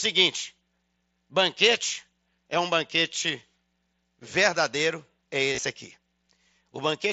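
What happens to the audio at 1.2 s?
At 1.19 s, just before "banquete é um banquete", there is a brief concealed Bluetooth headset packet loss. About 15 ms of audio, which fits two lost headset frames, never reached the phone. The receiver filled the hole by repeating the closest-matching stretch of the preceding waveform, so what you hear is a buzzy smear at full level rather than a gap. That sustained level is what separates it from a plain dropout, which would leave a silent break or a click.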